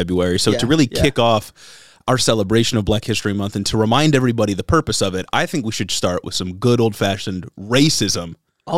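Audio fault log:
No faults detected in the speech recording; nothing to log.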